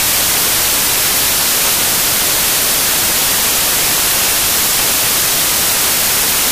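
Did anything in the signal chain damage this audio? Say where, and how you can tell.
Yes. The damage happened at the sample-format conversion stage, where samples were built from the wrong bytes. The reader assembled each sample's bytes incorrectly, either offset by one byte or with their order swapped, so the rapidly changing low-order bits became the most significant part of every value. Throughout the clip this turns the material into loud, harsh broadband noise.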